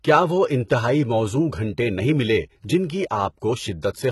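Throughout the clip, the treble is rebuilt rather than carried, most likely by HE-AAC compression. The lower spectrum is coded and copied upward by band replication, with nothing above 11.8 kHz. The heavy damage fits a bitrate around 16 kbps, leaving s sounds gritty, lispy and metallic.

At 0.68 s, right after "کیا وہ", the codec's block spreads quantisation noise ahead of a sharp attack that lands late in it. The result is pre-echo: a brief hiss of about 17 ms before the onset, which makes the attack sound softened and smeared.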